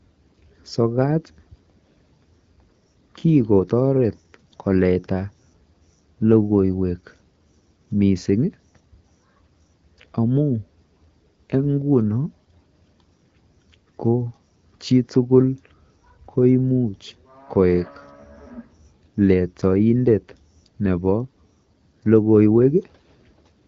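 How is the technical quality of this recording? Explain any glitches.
No glitches to report: the speech sits on an AMR wideband (HD Voice) path at 12.65 kbit/s, with only light codec coloration and the 6.4 to 7 kHz band filled by the codec's shaped noise.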